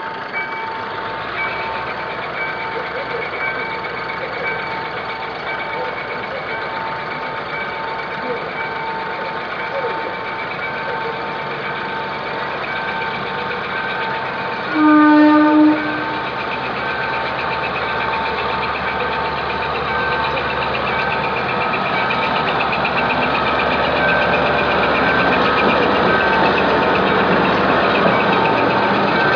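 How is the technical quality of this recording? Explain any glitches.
The recording shows no technical glitches, with the signal holding steady and intact throughout.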